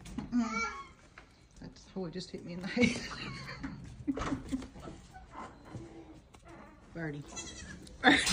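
A short, irregular burst of crackle and scratching breaks through the audio from 3.44 to 3.58 s. This is loose connector crackle: a worn or dirty contact is briefly making and breaking, chopping the signal.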